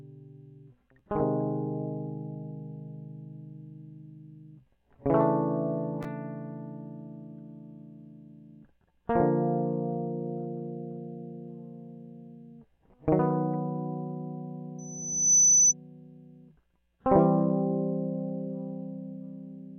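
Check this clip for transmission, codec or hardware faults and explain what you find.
A loudspeaker feedback squeal occurs from 14.78 to 15.74 s: the microphone re-amplifies the speaker's output, so a 6 kHz tone swells over about half a second to roughly 10 dB above the music.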